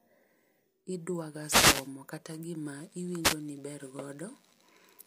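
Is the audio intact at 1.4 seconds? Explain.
No. A wireless microphone noise hit runs from 1.37 to 1.94 s. The FM radio link fades as reflected signals cancel at the receiver, letting its noise rise over the speech, which is heard as a short swish of static across that half-second.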